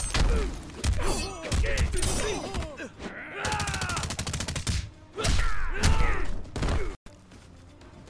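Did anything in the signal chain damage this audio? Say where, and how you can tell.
No, no chain damage heard.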